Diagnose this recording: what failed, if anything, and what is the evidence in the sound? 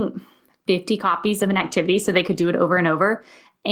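A call bitrate drop runs from 1.01 s to 2.55 s, a codec-stage fault driven by the call's bandwidth estimate. For about 1.5 s the speech turns coarse and rough, then its earlier clarity returns. The encoder was told to spend far fewer bits, so it quantises the spectrum more crudely. The degradation fits a fall from around 32 kbps to roughly half that before the estimate recovered.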